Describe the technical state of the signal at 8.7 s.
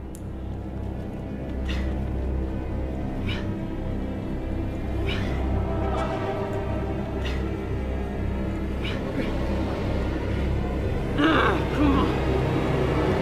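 At 8.7 s the signal is intact, with no dropout, clipping, glitch or other fault to be heard.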